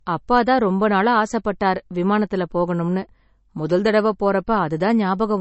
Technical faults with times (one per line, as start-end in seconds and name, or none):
0.00-5.41 low-bitrate audio saved at a high bitrate